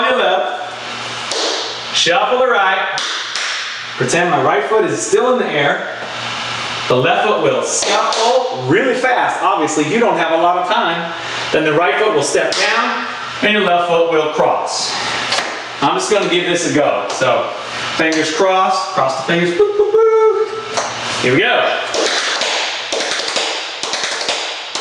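Gain pumping runs throughout: the gain ducks by around 20 dB under each loud sound, likely from excessive gain hitting a fast limiter, unlike a gate, which silences gaps.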